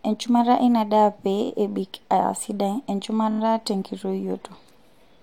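At 1.44 s, just after "eina daa pee", repeated frames make a 23.2 ms block play twice more, a brief stutter that adds 46 ms. At 3.30 s, after "pee ebik aa sidai", the same block length repeats four extra times, a longer stutter adding 93 ms.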